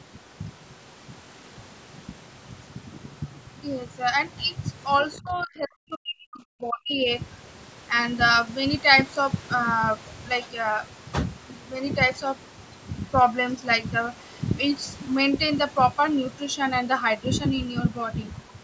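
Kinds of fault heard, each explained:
Other side's voice leaking through: For a brief moment from 5.13 to 5.17 s, a faint second voice slips in, about 25 dB below the main speech. This is likely loudspeaker sound from the far end that the echo canceller failed to strip from the microphone.
Speech suppressed in double talk: Right after, from 5.18 to 7.0 s, the main speech is pushed down hard, by roughly 40 dB at its deepest. The likely cause is both sides talking at once, so the echo canceller turned everything down together.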